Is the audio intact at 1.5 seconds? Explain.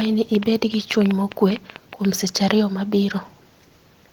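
No, a train of clicks runs from 0.01 to 2.06 s, likely interference or a faulty connection injecting pulses. About 15 irregularly spaced clicks, roughly 7.4 per second, pop about 10 dB above the speech.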